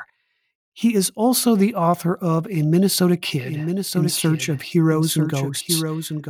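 Speech, with a doubled audio track from 3.41 s to the end: a second full-band copy of the same speech enters abruptly, trailing the original by about one second at roughly 5 dB lower, with no decay or room colour. The likely cause is the signal being captured again through a slower path, or an edit leaving two copies out of step. On a spectrogram, each pattern reappears shifted right by about a second; the waveform thickens suddenly at 3.41 s.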